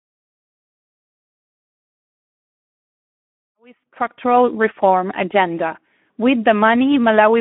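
Speex codec damage runs through the whole speech clip. Too few bits go to the excitation, so the speech sounds plainly hoarse and noisy, which fits a bitrate around 11 kbps. The audio sits in a telephone band from 200 to 3400 Hz.

VoIP packet loss concealed by the speech codec occurs from 3.45 to 3.61 s, between "million to support" and "structural reform agenda". About 60 ms of audio went missing, which points to three lost frames. The decoder stretched its last pitch and filter into a sound that fades out, and the speech stays weak for a moment afterwards.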